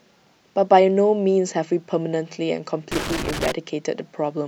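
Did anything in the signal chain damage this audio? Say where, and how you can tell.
Yes: irregular crackle and scratching from 2.92 to 3.52 s reveal loose connector crackle in the analogue wiring, a dirty contact intermittently breaking the speech signal.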